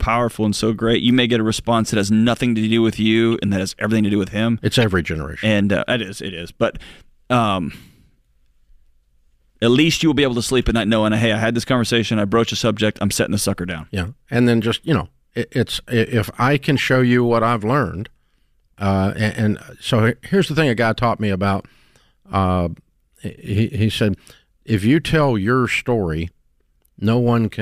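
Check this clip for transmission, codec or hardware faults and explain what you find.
There are three short glitches, all corrupt frames that got decoded anyway. At 3.32 s, between "nothing to do with" and "and that has everything", there's a glitch peaking around -20 dBFS. From 4.82 to 4.84 s, just before "generation and uh it", a louder glitch hits about -10 dBFS. From 16.77 to 16.83 s, after "it's if I can", a three-frame burst reaches about -15 dBFS. Each time, flipped bits made the decoder misread gains or codes and spray energy into the wrong frequencies for just those frames.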